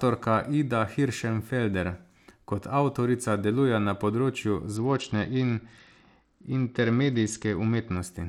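Right after "avtorica deluje na področju", at 4.76 s, there's a Bluetooth SBC bit pool drop lasting until 7.97 s. The top sub-bands get starved and the rest coarsely quantised, so the speech dulls and turns gritty. It fits a bit pool falling from 31 to 9, around 72 kbps.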